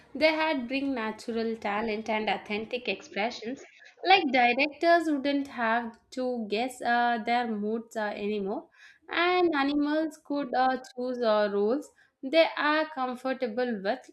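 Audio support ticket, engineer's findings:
Speech dulls 2.83–4.69 s, nothing above 6.9 kHz, then clears; no gap at switch, no level jump, faint new noise floor. Likely input switched to a poorer device, a narrower-band mic.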